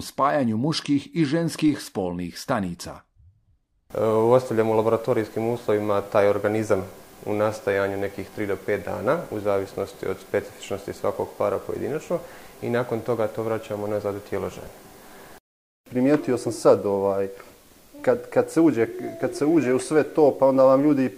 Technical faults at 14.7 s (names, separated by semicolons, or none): DC step